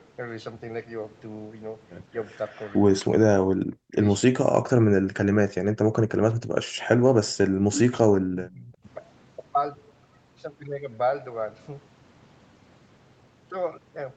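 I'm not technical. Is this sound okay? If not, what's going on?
No. There are two problems in this speech.

The first is an echo leak. At 2.47 to 2.81 seconds, and again briefly at 7.73 to 7.79, you can hear a delayed copy of the voice, about a quarter of a second late. The first time it is faint. The second time it is much louder. This likely happens because someone on the call uses a loudspeaker, and their echo removal let some of the sound slip back.

The second is speech suppressed in double talk. The voice suddenly drops almost to silence at 3.48 to 3.98, 4.59 to 4.69, 4.99 to 7.67, and 7.86 to 8.85 seconds. The longest gap lasts about two seconds. The likely cause is both sides talking at once. The echo removal could not tell them apart, so it turned this voice down too.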